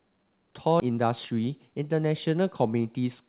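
At 0.80 s the speech lurches forward: the sound on either side of the jump is butted almost directly together, with no fill in between, and roughly seven tenths of a second of speech simply never plays. This is a skip ahead. Audio that had been held back was thrown away, either lost in transit or dropped when the jitter buffer overflowed, while later audio was already queued, so playback resumed at the newer material.

From 0.90 s to 2.01 s the speech sounds hurried, running about 109% of normal speed while the pitch stays where it was. This is a jitter buffer speed-up. After the jump, the buffer was still holding more audio than it aims for. To pull the delay back down, the receiver repeatedly cut out short slices one or a few pitch periods long, trimming roughly a tenth of a second in total across that stretch. Throughout the clip the band stops at 4 kHz, which points to a narrowband call codec such as G.711.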